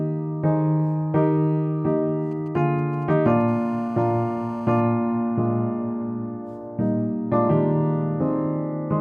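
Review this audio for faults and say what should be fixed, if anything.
GSM signalling bursts run from 2.31 to 3.42 s: a galloping dit-dit-dit of short buzzes at about 217 Hz, roughly 30 dB below the signal. A nearby 2G phone's brief radio bursts are rectified by the audio circuit, turning the radio pulses into audible buzzes.

GSM phone buzz follows from 3.48 to 4.81 s, a hard, raspy, harmonic-rich buzz at 217 Hz about 27 dB below the signal. Here the phone is in a call, transmitting steadily 217 times a second, and the circuit demodulates each burst into this tone.

To prevent both, keep mobile phones well away from the microphone, cables and preamp, or switch them to flight mode, and use shielded balanced cabling with RF filtering at the inputs.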